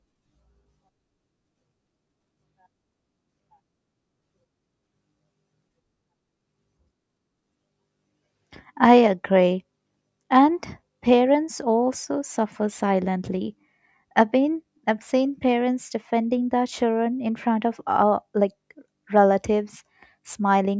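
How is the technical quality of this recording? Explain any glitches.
No glitches can be heard anywhere in this speech recording. Nothing interrupts or disturbs the audio at any point, so there is nothing to explain.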